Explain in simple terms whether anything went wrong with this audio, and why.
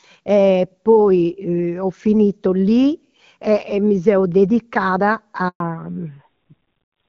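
Two things went wrong, both near the end. First, a handover gap: at 5.48 s the phone switched the call to a different network, and no sound reached the listener during the switch. The audio drops out for 120 ms, until 5.60 s, and whatever was said in that moment is lost.

Right after that, at 5.60 s, comes a fallback to narrowband: the call stepped down from HD Voice, which it had been using until then, to an older, simpler phone codec. From there to the end, everything above 4 kHz is missing, so the speech sounds duller, muffled and rougher.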